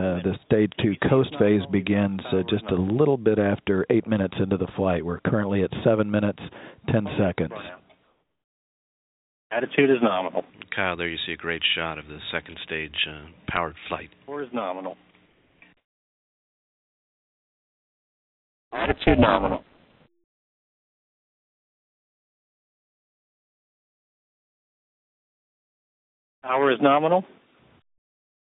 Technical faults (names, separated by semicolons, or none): comfort noise in place of the background; overlap-add ripple